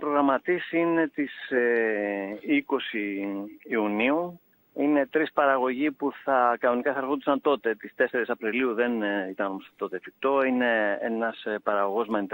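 Nothing here trips the ear at all: the sound just runs along with no glitches, dropouts or oddities worth pointing to anywhere in it.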